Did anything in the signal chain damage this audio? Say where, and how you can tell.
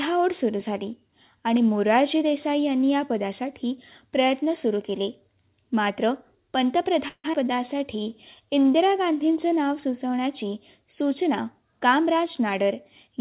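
Yes. At 7.08 s the speech stops and is replaced by a stretched-out continuation of the last sound that fades, ending in about 50 ms of silence, until normal speech resumes at 7.26 s. That is a call audio freeze, most likely in the network stage: packets were delayed, the jitter buffer ran dry, and the receiver filled about 159 ms with concealment. Nothing appears to be lost. The speech simply picks up where it paused, now later than before.

Right after that, from 7.32 to 7.35 s, there is a skip ahead. The speech jumps forward with only a tiny join of about 13 ms, and roughly a tenth of a second of speech is missing. This happens in the network or the jitter buffer. A stretch of audio was dropped while later audio was already waiting, splicing the two sides almost directly.

From 7.40 to 8.90 s the speech drags. It runs at about 92% speed with no change in pitch, so sounds are drawn out and there can be a faint warble. 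That is a jitter buffer slow-down. With its reserve running low, the receiver repeated single pitch periods and bits of pauses over and over, adding about 120 ms in total to rebuild its cushion.

From 11.58 s until 13.17 s, just before the clip ends, the speech sounds hurried. It runs at about 107% speed, again with unchanged pitch. This is a jitter buffer speed-up, happening in call processing. Too much audio had built up in the buffer, so the receiver cut many short pieces of one or a few pitch periods, about a tenth of a second in all, to bring the delay back down. The band-limited tone, with nothing above 4 kHz, fits the 64 kbps G.711 mu-law call codec the audio passed through.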